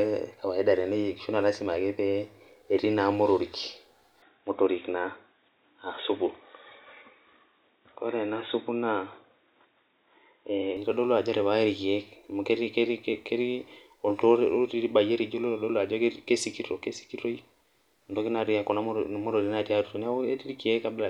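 The input was likely switched to a poorer device at 4.22 s, with the better source returning at 10.77 s. For that stretch the speech loses everything above 3.8 kHz, so it turns dull and boxy, lacking its crisp consonant detail, while a faint new noise floor, roughly 55 dB down, sits beneath it. Both changes happen instantly, with no silence at either switch, and the level stays about the same throughout.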